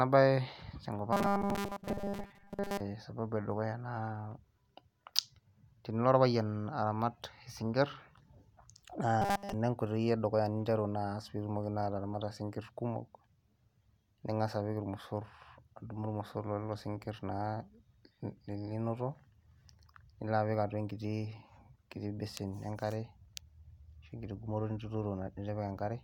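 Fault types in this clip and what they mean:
Robotic sound from repeated short buffers: audio likely arrived too seldom, so the same 5 ms fragment was looped while real speech was skipped, about seventy percent of the time. That loop imposes a fixed 200 Hz buzz, turning the speech rigid and metallic from 1.13 to 2.81 s and 9.22 to 9.54 s.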